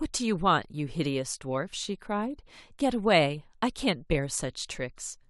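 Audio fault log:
No fault is heard in this speech clip.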